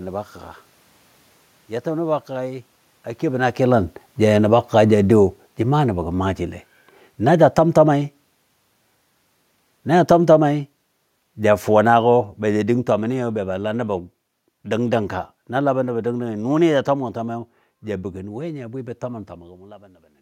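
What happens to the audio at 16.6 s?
The speech and its room background are sinking together, about 9 dB down by the end: automatic gain falling from 9.91 to 17.09 s, as the control gradually lowers its gain after judging the input too loud or its background noise too strong.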